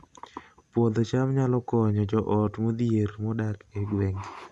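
Nothing in this recording calls for comment, as no technical faults turn up anywhere in it.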